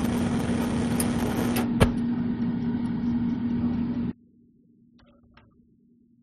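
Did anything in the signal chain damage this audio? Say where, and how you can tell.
Yes: from 4.11 s to the end, the sound drops about 28 dB, likely one channel inverted in the wiring, so the mono sum cancels.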